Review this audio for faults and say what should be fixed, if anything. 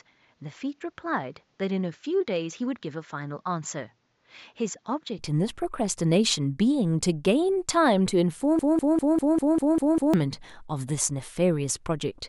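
From 0.0 to 5.19 s the speech is duller, with nothing above 7.6 kHz, about 5 dB quieter, and with a noise floor about 45 dB down. The clean switch with no gap points to a likely input switched to a poorer device rather than a filter.

From 8.59 to 10.14 s a 198.5 ms fragment repeats exactly eight times, back to back. This is a broken-record loop, likely a stalled stream, and unlike an echo it does not decay.

Lock the recording input to one device and add stall detection to the stream so a stuck buffer is flushed instead of replayed.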